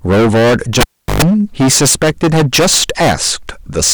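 From the start and through the whole speech clip there is heavy hard clipping. The signal was driven roughly 24 dB past what some stage in the chain could pass, so the waveform peaks are sheared flat. Something like a third of the waveform was cut off at that stage's limit. The flattened tops generate a dense spread of high harmonics, heard as a constant harsh fuzz on every loud syllable rather than occasional crackle.

At 0.81 s the cable is pulled and plugged in. A pop marks the break, and the audio drops to near silence for about 0.36 s while the connection is open. While only the tip touches, roughly 0.11 s of 50 Hz mains buzz gets through. A second pop follows at 1.22 s, when the contact seats fully and the sound returns.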